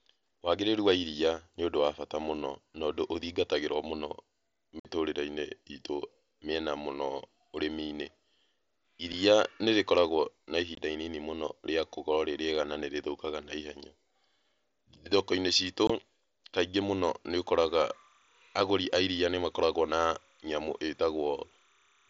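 Voice packets between the headset and the phone were dropped with nothing filling the gaps, a case of unconcealed Bluetooth headset packet loss. The speech breaks off into silence with abrupt edges at 4.80 to 4.85 s (52.5 ms), 9.12 s (7.5 ms), 10.75 to 10.78 s and 15.87 to 15.90 s (22.5 ms each). Through the mSBC wideband link, the speech around them carries a faint graininess.

From 17.69 s to the end, linear timecode running at 29.97 frames per second leaks in from a neighbouring track or cable. This timecode bleed is a square wave flipping between roughly 1 and 2 kHz. It sits well below the speech as a faint, steady chirping warble.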